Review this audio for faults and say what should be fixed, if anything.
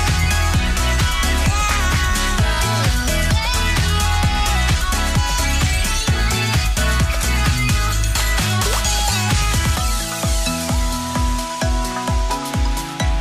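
Crude rate conversion runs through the whole clip: a gritty, inharmonic fizz that tracks loud and high-frequency sound. It fits a 32 kHz to 44.1 kHz change done by linear interpolation without an anti-imaging filter, leaving aliased error only roughly 25 dB below the signal. Re-run the conversion from the original source with a properly filtered, band-limited resampler.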